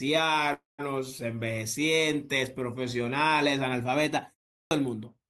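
A short speech recording has two faults. At 0.53 s a call audio freeze starts, lasting about 250 ms until 0.80 s. The last sound is stretched into a fading buzz, then about 160 ms of silence. The likely cause is delayed packets draining the jitter buffer. Nothing is lost, but everything after it is pushed about 250 ms later. At 4.59 s there is a clipped start after a pause. After a 0.32 s silence, the first 120 ms of sound is swallowed until 4.71 s. The sound begins abruptly because the output device had gone to sleep and needed time to wake.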